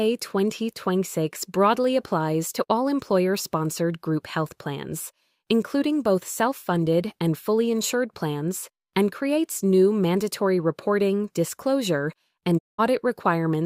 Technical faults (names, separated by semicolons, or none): digital broadcast dropout